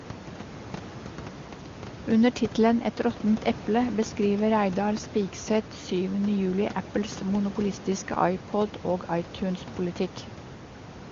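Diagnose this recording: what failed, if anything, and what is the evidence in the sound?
Nothing in the chain has failed: the speech passes through an AMR wideband (HD Voice) codec at a quality that fits its top 23.85 kbit/s mode, leaving at most faint coding traces, above a room noise floor sitting about 17 dB below the speech.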